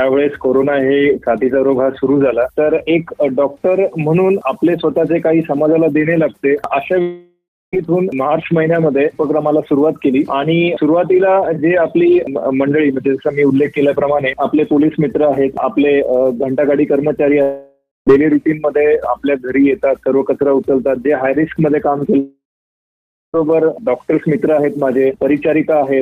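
At 7.0–7.7 s, 17.4–18.1 s and 22.2–23.3 s the sound smears into a fading buzz, then silence (about 0.28, 0.18 and 0.92 s), and resumes with roughly 0.72, 0.64 and 1.14 s missing. This is likely a long network dropout. The lost stretch, not a brief glitch or mute, sets it apart.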